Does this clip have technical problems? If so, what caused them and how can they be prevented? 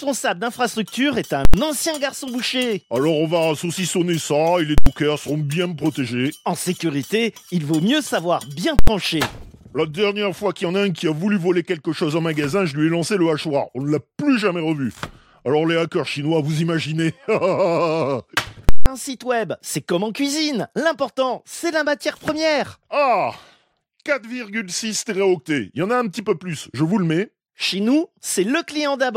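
Yes. Invalid numbers at full scale occur at 1.45, 4.78 and 8.79 s, each 85 ms long, and at 18.69 s for 170 ms. Non-finite results pinned whole processing blocks at maximum output, giving loud pops at each block's edges with nothing between. Replacing non-finite values before output prevents this.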